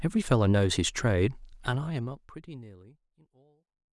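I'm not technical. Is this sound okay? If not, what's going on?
Yes, the speech recording is technically sound, and the gentle fade-out from around a second and a half to the end is a smooth, deliberate-sounding fade.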